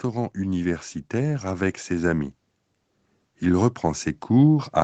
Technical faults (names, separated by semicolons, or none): automatic gain rising